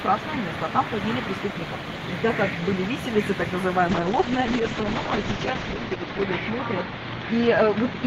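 A ground loop or nearby transformer is leaking the 60 Hz power line into the signal from start to finish, laying a steady low mains hum with some low harmonics well beneath the sound, roughly 35 dB down. At 3.88 s a call bitrate drop begins: the call's bandwidth estimate fell and the encoder was pushed to far fewer bits, which fits a fall from about 32 to 8 kbps. Coarser coding turns the sound rough and watery, the high end is cut from 20 kHz to 8 kHz, leaving it muffled, and the degradation holds to the end, bottoming out for 1.89 s.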